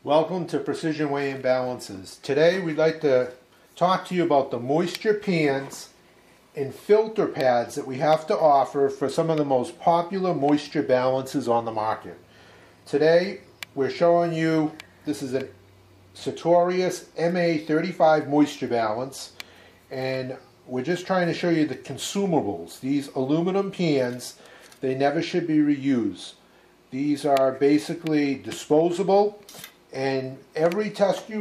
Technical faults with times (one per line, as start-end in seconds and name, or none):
none